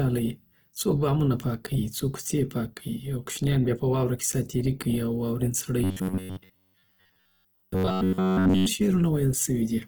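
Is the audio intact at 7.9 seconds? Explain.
No. From 5.84 to 8.66 s there is robotic sound from repeated short buffers. The likely cause is the software replaying roughly 10.7 ms chunks, so a rigid metallic buzz at about 94 Hz replaces most of the audio. On a waveform this looks like identical repeating cycles, and on a spectrogram like evenly spaced horizontal harmonics. Opus compression is also likely present throughout, at a bitrate that sounds like about 16 kbps in music mode, and it leaves grainy, rough tones. A spectrogram shows noisy, smeared bands extending across the full band.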